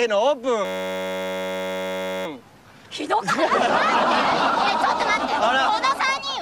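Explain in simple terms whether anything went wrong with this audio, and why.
From 0.65 to 2.26 s the sound turns into a steady buzz. This is a system hang loop: the computer froze while the sound hardware kept replaying one 10.67 ms piece, about 94 times a second, which fits a 512-sample buffer.

At 4.25 to 4.32 s there is a brief garbled flutter. This is frames out of order: two neighbouring 32 ms chunks were played in swapped order, so that short stretch is jumbled, but no time is lost.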